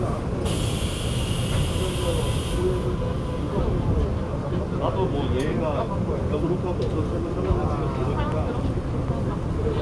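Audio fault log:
The sounds in this clip have an unbroken signal, with nothing in the playback path intruding on them at any point.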